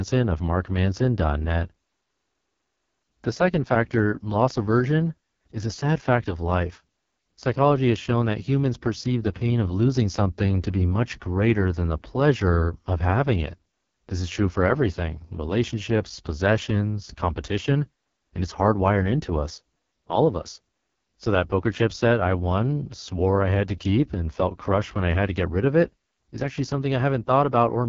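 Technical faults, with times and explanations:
Throughout: AMR wideband (HD Voice) codec. The speech sounds rough, raspy and buzzy, with nothing above 7.4 kHz. The pulse-driven vocal-tract model is starved of bits, which fits the lowest 6.6 kbit/s mode.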